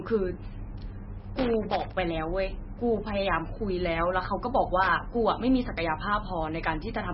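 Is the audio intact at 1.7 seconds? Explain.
No. A loose connector crackle runs from 1.36 to 1.94 s, so 1.7 s falls inside it. A worn or dirty contact keeps making and breaking as it shifts, chopping the signal in rapid, uneven bursts, and any DC sitting on the line turns each break into a pop. It comes across as an irregular patch of crackling and scratching laid over the speech for a little over half a second.

The moment also carries heavy damage that is present throughout and is likely MP3 compression at a very low bitrate, something around 18 kbps. Nothing is heard above 5.6 kHz, which is the encoder's fixed treble cut. With so few bits available, weak frequency lines are dropped and then return from frame to frame, giving the speech a watery, swirly quality, metallic chirps on s sounds and smeared attacks.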